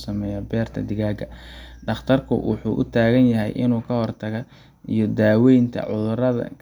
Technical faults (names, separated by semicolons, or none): none